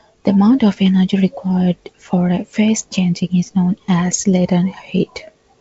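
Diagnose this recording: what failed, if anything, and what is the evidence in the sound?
Nothing in this speech recording points to a failure at any stage of the chain. What can be heard is G.722 wideband telephone coding, with the band ending at 7.7 kHz and at most a faint coding trace, which fits its full 64 kbit/s mode.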